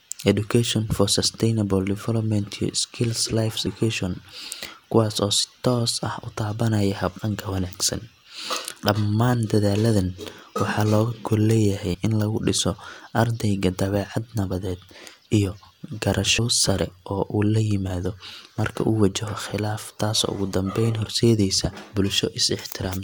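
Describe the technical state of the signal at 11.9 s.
At 11.94 s, compressed frames are skipped: about 50 ms, roughly two 26.1 ms frames, vanishes, so the audio jumps ahead, leaving a visible discontinuity in the waveform and spectrogram.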